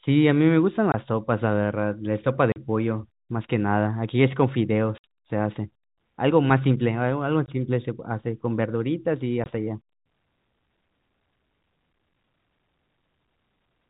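The speech drops out abruptly five times, each gap a hard-edged hole: 0.92 to 0.94 s, 2.52 to 2.56 s, 4.98 to 5.04 s, 7.46 to 7.48 s, and 9.44 to 9.46 s. This is packet loss filled with silence. Missing packets were replaced by nothing, and the gaps of 20, 40 and 60 ms point to 20 ms packets, lost singly or in runs, over the G.711 telephone coding.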